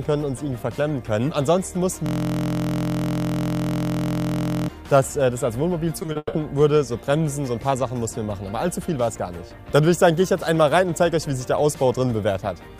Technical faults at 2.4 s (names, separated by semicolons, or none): system hang loop